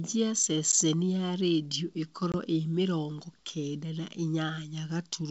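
Packet loss on an ADPCM call affects this speech clip at 0.72–0.74 s and 2.32–2.35 s. About 10 ms and 20 ms of audio drop out as hard-edged silences, roughly one and two packets' worth. The decoder's adaptive predictor and step size then lose sync with the sender, so the speech returns slightly distorted after each gap.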